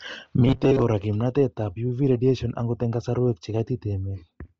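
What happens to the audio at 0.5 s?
From 0.47 to 0.82 s, new audio was likely arriving too seldom, so the playback side kept repeating its last short buffer to fill the gaps while the real signal was skipped. That is robotic sound from repeated short buffers. The repeats lock onto a steady buzz at 134 Hz, which fits a buffer of roughly 7.5 ms. For most of that span the speech becomes a rigid, metallic drone that only loosely follows its original shape.

Across the same moment, and the whole clip, the audio bears the marks of heavy Bluetooth LC3 compression, likely at a low setting such as 24 kbps with 7.5 ms frames. The encoder discards much of the upper spectrum and fills parts of it with noise, leaving nothing above 7.7 kHz. This gives the speech a dull top end with a breathy, grainy edge laid over the robotic buzz.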